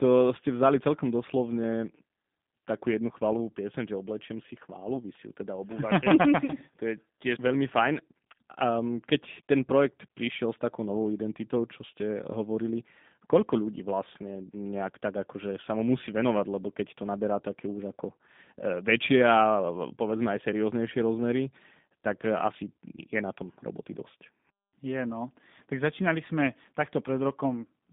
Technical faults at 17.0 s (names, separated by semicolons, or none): G.729 codec